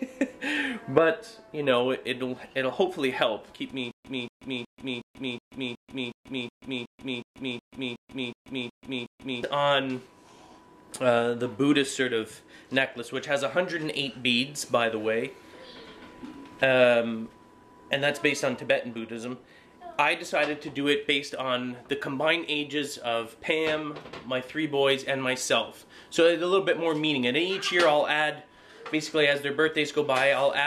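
From 3.91 s to 9.43 s the same 233 ms burst of sound repeats fifteen times, each followed by about 135 ms of dead digital silence, a steady 368 ms cycle. This stutter with silent gaps likely comes from a stalled stream replaying its last fragment, losing the audio meant for that span.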